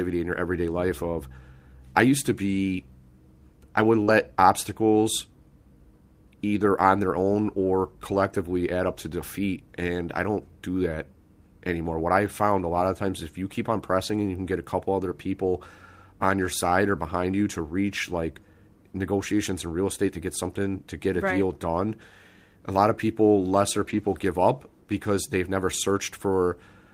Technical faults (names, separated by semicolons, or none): short concealed packet loss; lost packet rebuilt from error correction